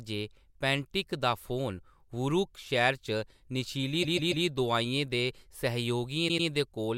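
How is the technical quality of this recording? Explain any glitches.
The recording has two stutters from repeated frames. From 4.02 s to 4.45 s, a run of compressed frames was sent more than once, so a 144 ms stretch of speech plays three extra times and the audio runs 432 ms longer. From 6.28 s to 6.47 s, a 96 ms block repeats twice, adding 192 ms. Both are heard as skipping-record stutters.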